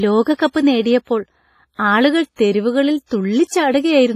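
The whole speech clip carries heavy transform-codec damage, most likely WMA compression, and the smeared, washy texture points to a low bitrate somewhere around 24 kbps. The encoder works in long blocks, so its quantisation noise gets spread over tens of milliseconds and weak detail gets thrown away. You hear a ringing, swirly quality with hiss that swells and fades along with the speech, and nothing at all above 15.5 kHz.

On top of that, there's pre-echo at 0.35 s, 1.75 s just before "ആളുകൾ തെരുവുകളിൽ", 2.36 s, 3.06 s after "ആളുകൾ തെരുവുകളിൽ", and 3.47 s. Each time, a sharp onset lands late in a codec block, and the noise budget set for that loud onset leaks back into the quiet gap ahead of it. You get a brief hiss of roughly 25 to 49 ms running up to the attack, and the onset itself sounds soft and blurred instead of crisp.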